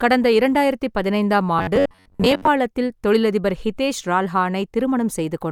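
From 1.59 to 2.47 s the speech turns into robotic sound from repeated short buffers. It becomes a rigid, metallic buzz near 93.8 Hz. The likely cause is audio arriving too slowly, so roughly half the time is filled by replaying a 10.7 ms snippet.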